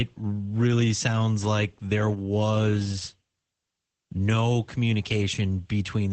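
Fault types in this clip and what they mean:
Opus voice compression: the speech runs through a linear-prediction voice coder at a low rate, which fits roughly 12 kbps. Nothing above about 8.6 kHz survives, so it sounds muffled. The coarsely coded excitation gives plainly audible hoarseness and a slightly robotic edge throughout.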